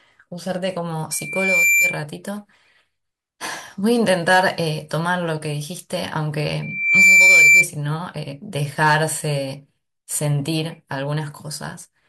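From 1.11 to 2.02 s and 6.62 to 7.67 s, loudspeaker feedback squeal: the microphone re-captures its own loudspeaker, and a 2.4 kHz tone runs away, swelling over about half a second the first time and 0.4 s the second, above the speech, louder the second time. A spectrogram shows a horizontal 2.4 kHz line; the waveform envelope bulges.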